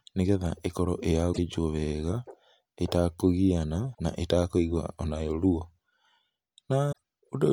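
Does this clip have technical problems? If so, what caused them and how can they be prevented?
Yes. Damaged data in a compressed stream produces brief disruptions at 1.29–1.39 s, 3.91–4.00 s and 6.89–6.98 s. Corrupted bytes make the decoder misread frames and hunt for the next header. Each lasts about 0.1 s. Checksummed transfer and verified storage prevent it.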